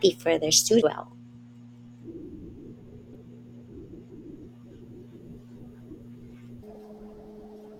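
At 0.82 s and again from 3.12 to 3.16 s there's damaged data in the compressed stream: the decoder loses sync and searches for the next frame, giving a quick glitch. From 6.63 s to the end, that section plays at the wrong speed, about 1.77 times too fast, so the speech jumps roughly ten semitones higher and sounds rushed, likely from playback against the wrong clock.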